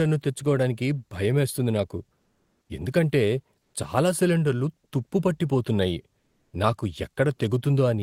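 Comfort noise replaces the background at 2.21 to 2.69 s, 3.59 to 3.73 s and 6.19 to 6.53 s. The pauses go flat and featureless, likely from Opus DTX.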